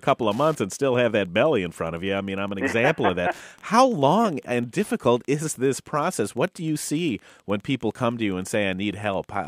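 A nearby Wi-Fi radio is coupling into the audio circuit, which rectifies its beacon transmissions, repeating every 102.4 ms. This Wi-Fi interference runs through the whole speech recording as a steady ticking just under ten times a second, roughly 35 dB below the speech.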